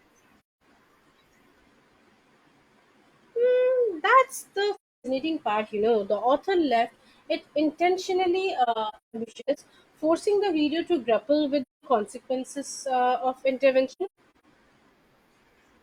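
Speech with AAC frame loss with muting: soft-faded silent holes at 0.41, 4.75 (before "part you"), 8.63–9.59 (scattered), 11.62 and 13.92–14.44 s, unlike hard dropouts.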